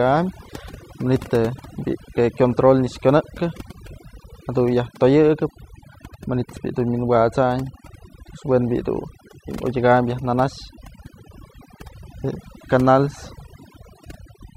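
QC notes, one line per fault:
Throughout: overdone noise removal. Bands near the noise floor are pushed down hard, leaving near-silent background with twinkling specks, unlike plain low-level gating.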